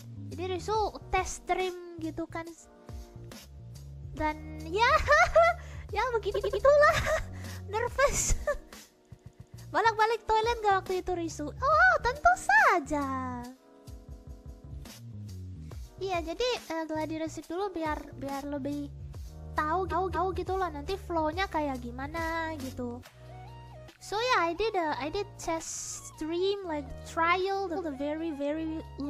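You get repeated frames at 6.34, 9.13, 14.1, 19.9, 25.71 and 27.75 s, where short blocks of about 46 to 232 ms loop back and play again. Each one is a stutter, and together they stretch the audio.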